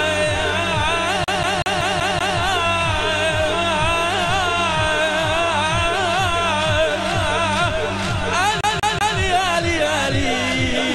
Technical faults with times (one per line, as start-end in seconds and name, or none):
1.24-2.38 CD stuck on one turn
8.61-9.18 CD stuck on one turn